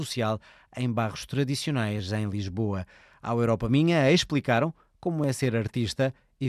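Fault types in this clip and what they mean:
Clock drift buffer slips: a regular click recurs about every 1.62 s through the speech, roughly four times between 0.37 and 5.24 s, each a dropped or repeated block of around 30 samples, likely from two unsynchronised clocks differing by roughly 400 ppm.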